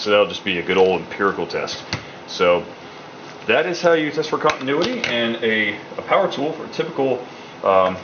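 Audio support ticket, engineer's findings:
No audible faults found.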